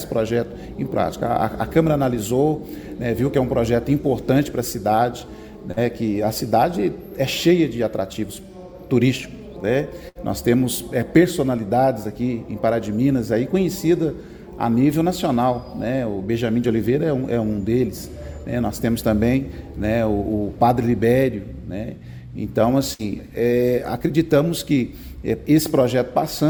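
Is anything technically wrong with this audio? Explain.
Yes. At 5.71, 10.09 and 22.93 s the sound briefly freezes into a held, dimming tail, then jumps ahead. This is a burst of packet loss: about 60 ms never arrived, and the receiver stretched the last sound over roughly 55 to 65 ms, fading it before resuming later.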